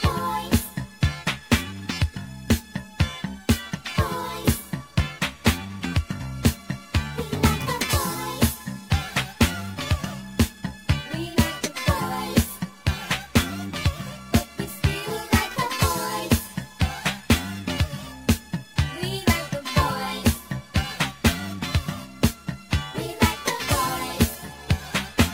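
Throughout the clip there is crude rate conversion. The sound carries a gritty, inharmonic fizz that rides on louder and brighter passages, which fits an upsampling from 44.1 kHz to 48 kHz done by simply repeating the nearest sample rather than filtering. The repeats fall in a fixed pattern set by the two rates, adding shifted, inharmonic copies of the content at a level of roughly 20 dB below the signal.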